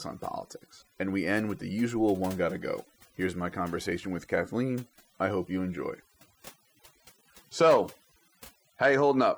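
Speech with overdone noise removal from start to end. Pauses drop to near silence with twinkling specks. The voice has its quieter parts stripped away.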